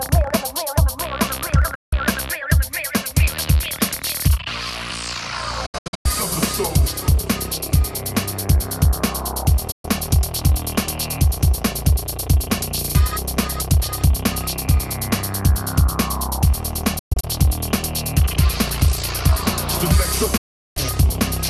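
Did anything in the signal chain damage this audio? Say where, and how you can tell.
Yes, damage happened at reception: five digital broadcast dropouts, where the receiver muted on lost or corrupt frames. The sound drops out at 1.75–1.93 s, 9.71–9.85 s and 20.37–20.77 s, and breaks into short holes at 5.66–6.06 s (longest about 96 ms) and 16.99–17.24 s (longest 120 ms). The gap lengths step in multiples that fit 24 ms frames. On a waveform each gap is a flat line with 8 ms fades; a spectrogram shows full-band blank columns.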